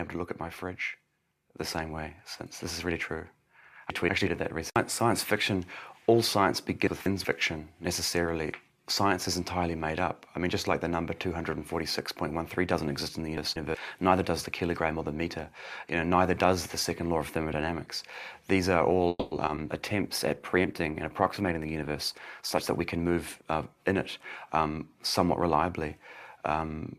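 At 3.90 to 4.27 s, 6.87 to 7.25 s and 13.38 to 13.75 s, the sound jumbles briefly. These are chunks out of order: in each, a 186 ms block plays one chunk late, swapped with its neighbour. The waveform shows hard discontinuities at the three joins, and the spectrogram shows vertical broadband lines where mismatched edges meet.

From 19.09 to 19.33 s a call audio freeze stretches the last sound into a fading buzz for about 220 ms, ending in roughly 20 ms of near-silence before the audio resumes where it stopped. Packets were likely held up until the jitter buffer ran dry. On a spectrogram the final spectrum smears horizontally and decays. The waveform shows a shrinking envelope.

Right after, short concealed packet loss strikes at 19.37, 19.46 and 19.55 s. Each time, about 20 ms never arrived and roughly 10 ms was synthesized from the preceding sound before blending back. Each is heard as a brief smear or wobble. 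A spectrogram shows a brief blurred patch with softened edges.

From 19.59 to 22.79 s a call bitrate drop takes the encoder from 128 to 20 kbps for about 3.2 s. The sound turns rough and muffled as high frequencies disappear. The spectrogram shows an abrupt ceiling where upper bands go empty, plus grainy, blocky texture below it.

Overlapping that stretch, two jitter buffer speed-ups trim the excess buffered audio by cutting pitch-period-sized pieces. From 21.42 to 21.90 s playback runs at 116% speed, removing about a tenth of a second. From 22.41 to 23.42 s it runs at 106%, removing about 70 ms. Pitch stays the same but timing sounds hurried. Spectrogram events compress in time, and the waveform shows many tiny, nearly seamless splices.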